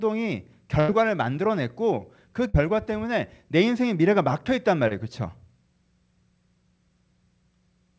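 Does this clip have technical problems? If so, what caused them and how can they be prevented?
Yes. A burst of packet loss occurs at 0.80 to 0.91 s and 2.47 to 2.57 s. The receiver stretched the last sound into a fading buzz or hiss, then skipped ahead, losing about 90 ms and 60 ms. A steadier network path, or forward error correction or redundancy, would prevent this.

A short concealed packet loss at 4.88 to 4.94 s leaves a brief smear where about 30 ms never arrived and the decoder patched the gap from the preceding sound. A larger jitter buffer or a more stable connection would prevent it.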